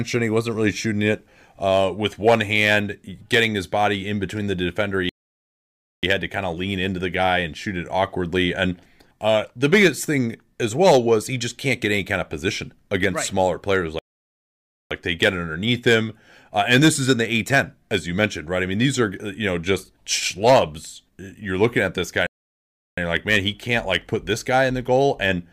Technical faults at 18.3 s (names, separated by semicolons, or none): none